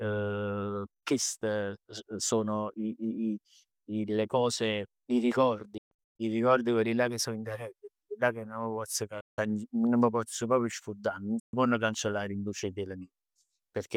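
The speech drops out three times, most likely as a Bluetooth dropout. From 5.78 to 6.20 s, about 300 ms of sound is missing in scattered holes, the longest 130 ms. Further gaps follow at 9.21 to 9.38 s and 11.40 to 11.54 s. Each hole cuts out to silence, and the speech resumes as though it had kept playing, so the missing stretch is lost rather than delayed. That sets it apart from a stall or buffer underrun, which pauses and then continues late.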